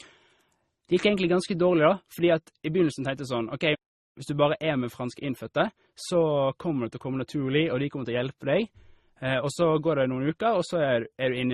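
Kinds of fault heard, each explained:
Transcoding between lossy codecs: the speech carries several kinds of coding damage at once, with nothing above about 14.1 kHz and the different artefacts heard together. It likely passed through a chain of codecs, with the character fitting a very low-rate MP3 stage followed by Opus and then AAC-LC. A single low-bitrate encode leaves one consistent artefact style, but here mismatched artefacts sit on top of each other.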